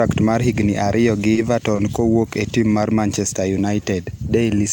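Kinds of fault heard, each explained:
Short stall from a late packet: packets arrived late and the jitter buffer ran dry, so the receiver stretched the last sound, by 20 ms at 1.33 s and 30 ms at 1.75 s, then resumed where it stopped. Nothing is lost, but the speech briefly hangs.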